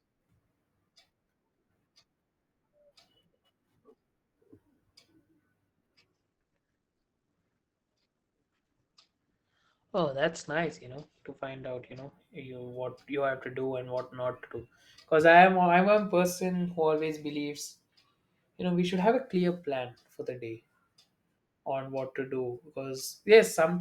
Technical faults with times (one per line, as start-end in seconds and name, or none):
6.13-12.13 adaptive stream at a lower bitrate